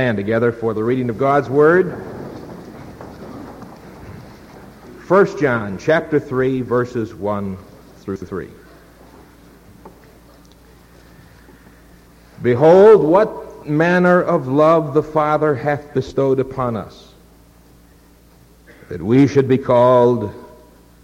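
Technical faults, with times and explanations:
8.16–8.28 s, chunks out of order: a 60 ms chunk plays one chunk late, after the chunk that should follow it. Nothing is lost, but the two swap places. Three hard joins result, heard as a brief jumbled stutter.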